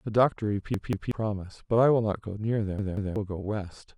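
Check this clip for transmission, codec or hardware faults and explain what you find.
Two repeated buffer faults occur in this speech clip, from 0.74 to 1.12 s and from 2.79 to 3.16 s. In each, a segment of about 186 ms plays twice more after its first pass, which fits an 8192-sample buffer being replayed when fresh audio failed to arrive in time. Each sounds like a stutter, with hard joins at every repeat and around 0.4 s of real speech missing afterward. On a waveform, identical blocks sit side by side with abrupt discontinuities. A spectrogram shows the same pattern copied three times, separated by vertical broadband lines at the seams.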